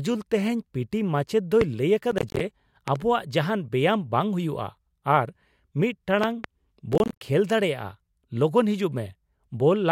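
At 1.61 to 1.64 s a single sharp loud pop jumps about 15 dB above the speech, likely a voltage spike from a plug, switch or static discharge.

From 2.11 to 2.40 s a gritty burst of processor overload crackle tears through the speech. Around fifteen short buffers, fitting roughly 10 ms each, missed their deadlines and dropped to silence, leaving hard-edged gaps.

At 2.88 to 2.98 s two quick pops, about 10 dB above the speech, thump over the sound, which continues underneath. They are likely another pulse added to the signal.

At 6.24 to 6.46 s a further pair of pops lands, about 15 dB above the speech, again likely from a pulse added to the signal.

From 6.93 to 7.21 s the processor overload crackle returns with the same rough tearing. Roughly fifteen buffers of about 10 ms were missed and left as silent gaps.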